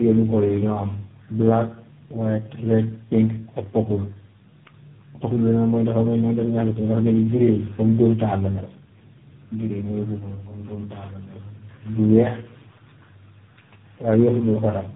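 Throughout the speech there is tandem speech coding. It sounds as though the call passed through about four low-rate speech codecs in a row, each re-encoding the last one's decoded output. Errors compound into rough, muffled, warbly speech with nothing above 3.8 kHz.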